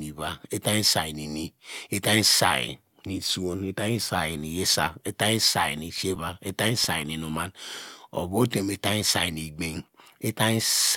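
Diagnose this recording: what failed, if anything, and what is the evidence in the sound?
A scratch on the CD defeats error correction once per revolution. The speech gets eight brief ticks, the longest a few milliseconds, from 5.81 to 7.02 s after "itany say".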